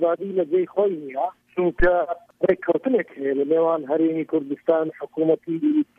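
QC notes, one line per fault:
1.80 to 1.87 s, phantom power thump: a deep low thump lands here and dies away within about 17 ms, the kind of step you get when phantom or another supply gets switched on a live input and the jolt pushes straight through the coupling capacitors.
2.12 to 2.14 s, compressed frames skipped: the audio jumps forward by roughly 100 ms, about five frames' worth at 23.2 ms each, so a chunk of the stream just never played.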